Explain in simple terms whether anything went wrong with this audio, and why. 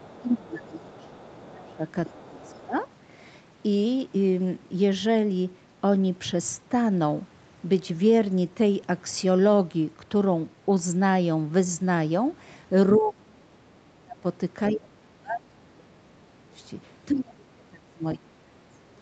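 Two problems show up, both tied to the other person talking at the same time.

Speech suppressed in double talk: from 0 to 2.75 s, 12.99 to 16.57 s and 17.1 to 18.86 s, the talker's own voice sinks, turns dull or drops out in pieces. The likely cause is the echo canceller turning everything down while both people spoke.

The other side's voice leaking through: a faint second voice sits underneath from 0.05 to 2.62 s, with brief scraps at 12.94 to 12.99 s and 14.67 to 14.75 s. Unlike the suppression, this adds a sound rather than taking the talker's away, likely from loudspeaker echo the canceller missed.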